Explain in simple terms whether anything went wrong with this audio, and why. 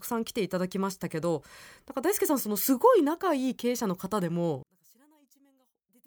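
Yes. From about 4.63 s to the end, the speech suddenly drops almost to nothing; likely one channel inverted, so the two sides cancel each other out.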